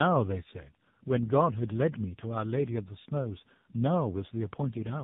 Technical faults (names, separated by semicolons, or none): tandem speech coding